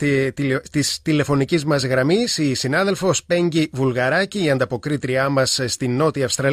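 No technical faults can be heard anywhere in the audio.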